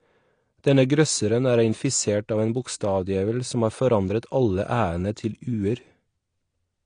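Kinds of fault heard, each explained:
AAC compression: The speech sounds dull and smeared throughout, and the damage is plainly audible. Nothing sits above about 9.8 kHz, so the top of the spectrum is simply gone. The likely cause is AAC-LC coding at a low rate, which fits about 32 kbps. At that rate the encoder lowers its cut-off and quantises the remaining bands coarsely against a hearing model. Sustained sounds and sibilants pick up a warbling, fizzy texture.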